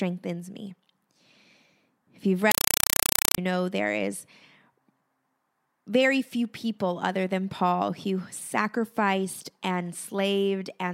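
From 2.51 to 3.38 s, compressed stream played as audio: undecoded AC-3 becomes loud chattering static, 4 ms broadband bursts 31 times a second.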